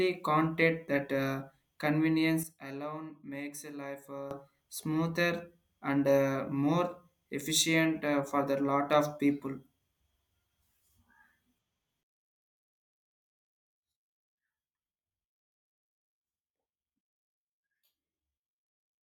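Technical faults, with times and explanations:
2.43–4.31 s, sudden gain jump: the speech and its background noise drop together by about 12 dB in a single step, with no fade, then return to the earlier level just as abruptly at 4.31 s. The step edges can click.
12.03 s to the end, sudden gain jump: a deeper drop of about 21 dB, again hitting speech and noise equally and with no ramp, and it stays down to the end. A gain setting likely applied instantly, sample to sample, would sound like this.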